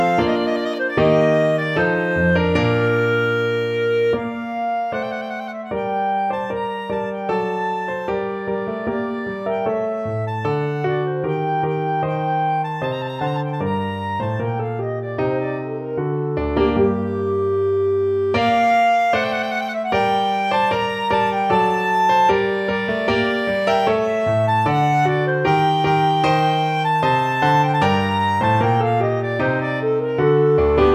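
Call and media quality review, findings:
No findings in this call and media quality review; nothing faulty was heard.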